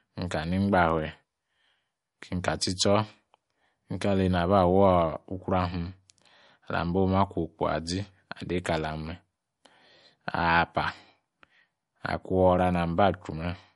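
Throughout, the speech stops dead at 11.2 kHz. Weak detail flickers in and out, sounding watery. This is likely MP3 compression, fitting a bitrate near 48 kbps.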